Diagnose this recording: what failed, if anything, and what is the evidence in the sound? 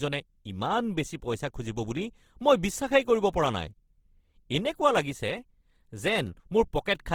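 The codec stage failed, with Opus compression damage throughout the speech, plainly audible as rough, grainy texture. Content extends to about 20.3 kHz, so bandwidth is intact. The graininess fits the CELT music mode starved near 16 kbps, likely filling bands with folded or noise energy.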